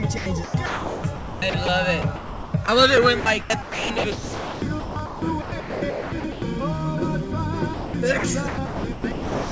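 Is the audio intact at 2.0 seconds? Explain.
No, not quite. From about 2.02 to 2.68 s the sound gets chopped, with roughly 420 ms swapped for a synthetic hiss. That's likely the sender's voice detector gating it off and filling in comfort noise.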